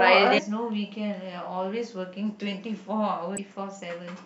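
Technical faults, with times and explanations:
0.37–0.39 s and 3.37 s, damaged data in a compressed stream: each is a brief glitch lasting one to two hundredths of a second, where the speech is briefly broken. Corrupted bytes in the encoded stream made the decoder rebuild garbage from bad frame data until it found the next valid frame.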